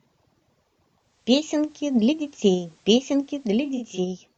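At 0.96 s the digital radio blends to analogue FM, fading across over 446 ms, and returns to digital at 4.03 s. The receiver lost its digital stream and crossfaded to the station's FM signal. Hiss rises to roughly 40 dB below the speech, and the level shifts by about 2 dB. Unlike a dropout or codec glitch, the sound never stops; it glides into a noisier rendering and later glides back.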